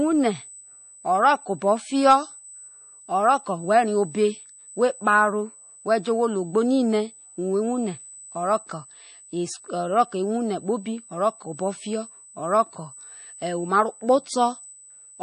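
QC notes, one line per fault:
Throughout, USB whine: there's a steady, fixed-pitch tone sitting at 8 kHz, running under the speech at roughly 25 dB below it. That pitch matches the 125-microsecond microframe rate of a USB bus, so the current pulses of the bus are leaking into the audio path through the power or ground wiring. Because it's locked to the bus timing rather than to anything in the room, it never drifts.
Throughout, MP3 compression: the codec damage is plainly audible, and nothing survives above 9.8 kHz, so the top end sounds clipped off like a low-pass filter. The likely cause is MP3 encoding at a starved bitrate, which fits something around 32 kbps. The encoder runs out of bits, drops the weaker frequency lines and lets them flicker in and out between frames. It also cuts the treble at a fixed point, which explains that hard ceiling.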